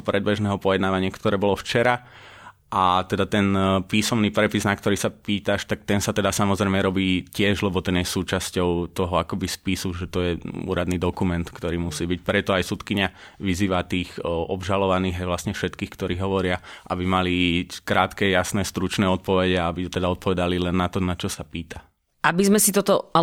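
No technical faults can be heard anywhere in this speech recording. There is nothing in it that needs a time or a cause attached.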